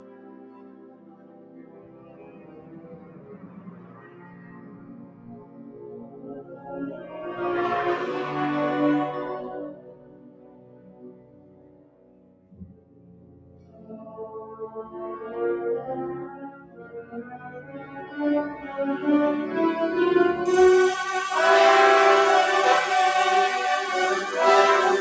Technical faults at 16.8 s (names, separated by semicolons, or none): noise suppressor applied to music or sounds; sound cut by the noise suppressor